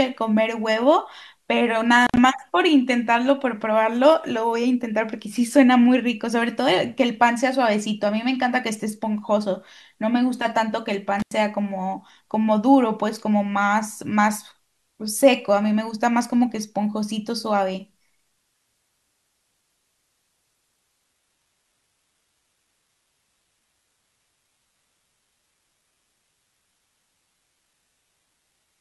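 A speech recording with two kinds of fault. Intermittent contact breaks the signal twice, from 2.03 to 2.18 s and from 11.20 to 11.33 s. Each time a loose connection opens for roughly 72 ms and then 89 ms, so the audio drops out with a crackle at each edge and only faint hiss in between. On a waveform these look like near-flat gaps framed by sharp spikes. On a spectrogram they show as thin vertical bands of broadband clicks around an almost empty slot. From 21.05 s to the end, the adaptive stream switches to a lower bitrate with no gap. The treble suddenly thins, with codec artefacts more audible. The sound points to a drop from a full-rate AAC encoding to a low-rate HE-AAC one, around 16 kbit/s. On a spectrogram the top edge steps down sharply to nothing above 11.8 kHz, and the upper band looks patchy and replicated rather than natural.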